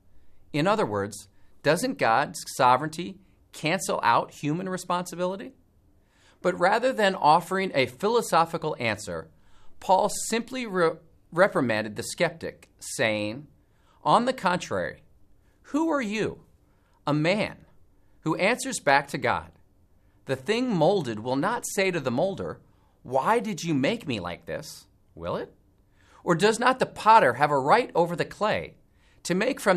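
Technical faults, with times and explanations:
No technical faults can be heard anywhere in the audio. There is nothing to list with a time or an explanation.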